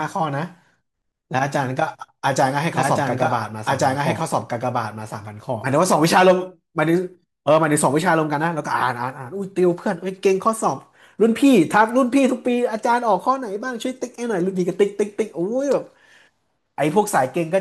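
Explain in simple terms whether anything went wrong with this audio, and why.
A doubled audio track appears from 2.73 to 5.65 seconds: a second, equally loud copy of the speech trails about a second and a half behind, starting and stopping abruptly. The likely cause is the same sound being recorded twice through a slower path.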